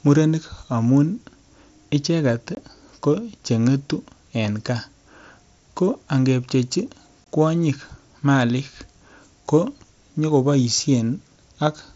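A short hole breaks the speech from 2.55 to 2.57 s, just before "ko cheng'etu en", and again from 7.24 to 7.26 s, between "ko angepchechi" and "kwonyik malik". Both are a block of digital silence about 21 ms long, which fits a 1024-sample output buffer the program didn't fill in time. The sound drops straight to silence and back with no fade. Through the Bluetooth mSBC headset codec, nothing is heard above about 7.7 kHz.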